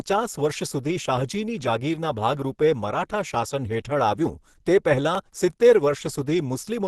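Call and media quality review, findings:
Opus compression throughout: speech muffled, hoarse and grainy, plainly audible codec damage, with nothing above 12.1 kHz. Likely an Opus encoder at low rate, sound fitting hybrid speech mode at around 16 kbps. Bits starved, bands noise-filled, bandwidth cut. Spectrogram: hard ceiling at 12.1 kHz, smeared noisy texture replacing clean harmonics below. Waveform: envelope intact, no gaps.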